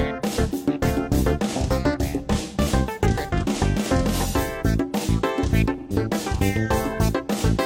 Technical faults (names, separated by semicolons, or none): AAC frame loss with concealment